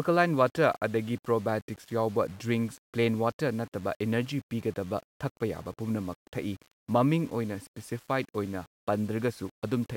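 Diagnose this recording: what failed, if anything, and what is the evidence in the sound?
Low bit depth without dither, throughout. Grainy distortion follows the speech, about 30 dB down. Likely undithered rounding to roughly 7 bits at sample-format conversion.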